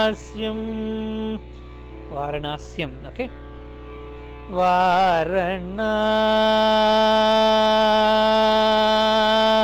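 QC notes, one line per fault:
Throughout, sample clock jitter: the converter's clock wanders by roughly a microsecond or two, so samples land early or late and add an error around 40 dB down. That error tracks waveform slope, giving a hiss that thickens on loud, bright passages. On a spectrogram, a faint broadband haze rises with high-frequency energy and clears in silence.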